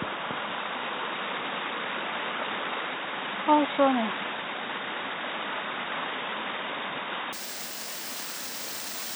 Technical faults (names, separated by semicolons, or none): input switched to a poorer device